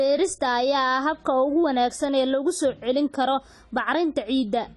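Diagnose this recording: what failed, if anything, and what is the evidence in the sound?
AAC compression, present throughout the speech: nothing is heard above 11.4 kHz, and the damage is plainly audible as dullness and smearing. At the codec stage, the likely cause is AAC-LC at a low bitrate, consistent with around 32 kbps, coarsely quantising spectral lines and lowering the bandwidth.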